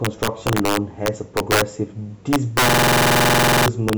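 Right through the speech there's integer overflow: the level's pushed about 7 dB too hot, so a small share of peaks wrap to the opposite sign, giving sharp, nasty cracks. Then from 2.69 to 3.67 s a system hang loop kicks in, repeating one 46 ms chunk at 21.5 Hz, a machine-gun stutter that fits a 2048-sample buffer.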